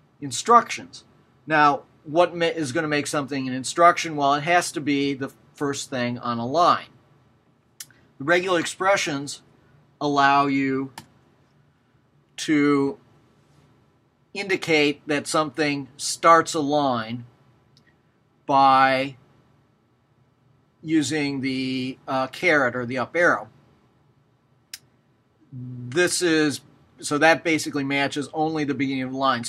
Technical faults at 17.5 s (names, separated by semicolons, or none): none